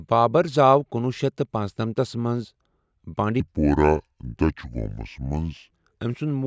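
From about 3.40 s to 5.71 s the voice suddenly drops and drags. That's a wrong sample rate problem: the samples go out slower than they were captured, with no conversion in between, so speed and pitch fall together. Everything runs at two-thirds speed and sits about 7 semitones low, which fits 24 kHz material being played back at 16 kHz. It sounds deep and sluggish until it snaps back.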